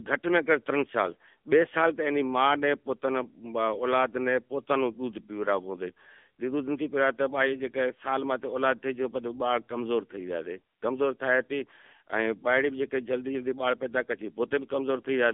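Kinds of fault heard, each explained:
AMR narrowband mobile codec: The speech has passed through the AMR-NB phone codec. It rebuilds the voice from a vocal-tract model excited by sparse pulses, frame by frame. Here the band runs only from about 200 Hz to 3.5 kHz, with nothing above 3.5 kHz, so it sounds dull and boxy. The coding damage is plainly audible throughout. The voice has a buzzy, synthetic edge, which fits one of the codec's middle modes, near 8 kbps.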